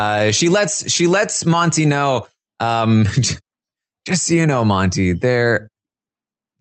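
Throughout the clip, there is clock drift between sender and receiver. The sending device's audio clock runs slow, by roughly 3 percent, so samples reach the jitter buffer more slowly than the receiving side plays them out. The buffer keeps draining toward empty, and playback has to be held back again and again. This is heard as speech that never settles into a steady pace, with faint irregular stumbles spread across the whole recording.

From 0.02 s to 6.35 s, the receiver makes repeated timing corrections to stay in step with the slower sender. Each time the buffer runs low, it repeats a short piece of audio, and these small insertions add up to about a fifth of a second. Overall, the speech plays at about 97 percent speed. The edits are unevenly spaced, so the tempo wavers slightly, with occasional small hiccups. The speech stays band-limited to about 8 kHz by the call codec.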